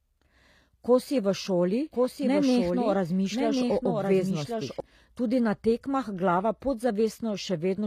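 Throughout the speech there is plainly audible HE-AAC compression damage, which fits a low bitrate of around 24 kbps. The treble is rebuilt from copied lower bands, so s sounds turn gritty, metallic or lispy. On a spectrogram, the top band looks like a patterned, repeated copy whose harmonics don't line up with those below the crossover.

From 1.92 s, just after "si v šoli", until 4.80 s, before "tudi na tekmah glava", a doubled audio track appears. A full-band copy about 5 dB quieter trails the original by roughly a second, likely from a second capture path or an out-of-step edit. It starts and stops abruptly. The waveform shows a second, overlapping envelope, and the spectrogram shows a ghost layer shifted in time.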